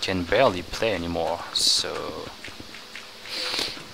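Nothing in this one trips the ear: no dropouts, glitches or other technical faults turn up anywhere along the way.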